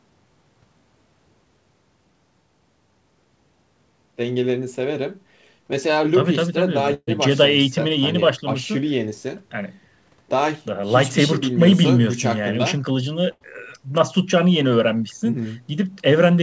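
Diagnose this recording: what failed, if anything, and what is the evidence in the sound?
The network dropped packets in two bursts, and each burst of packet loss was covered by the receiver's concealment. At 6.94 to 7.09 s, the last received sound is extended and faded for about 130 ms, ending in roughly 40 ms of silence. When audio resumes, 140 ms of the original is gone. At 13.31 to 13.43 s, about 90 ms of decaying fill stands in for 100 ms that never arrived, within audio that stops at 8 kHz.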